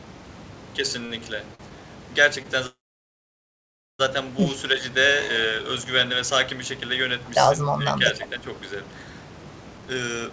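At 1.06 to 1.20 s and again at 1.55 to 1.61 s there are short stalls from a late packet: the jitter buffer ran dry, and the receiver stretched the last sound for about 42 and 43 ms, leaving a brief held tone with nothing lost.

From 2.67 to 4.01 s a call audio freeze holds the speech for about 1.33 s. A brief fading buzz gives way to about 1.24 s of silence, likely because packets were delayed in transit, before the speech resumes where it stopped.

Between 7.76 and 8.48 s the speech dips by about 5 dB in patches totalling roughly 0.4 s, likely speech suppressed in double talk, where the echo canceller attenuates the talker along with the far end.

From 9.77 s to the end, a jitter buffer speed-up removes roughly 0.2 s in pitch-period slices, so the speech runs at 135% speed at unchanged pitch and sounds hurried. Throughout, the G.722 call path leaves nothing above 8 kHz.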